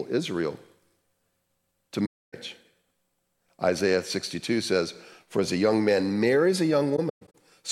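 AAC frame loss with muting at 2.05 to 2.34 s, and again at 6.96 to 7.35 s after "young man marries a": lost frames were decoded as silence, so overlapping windows fade into soft-edged holes. The first is one gap of about 0.28 s; the second is broken, scattered over about 0.38 s, its longest run around 0.15 s.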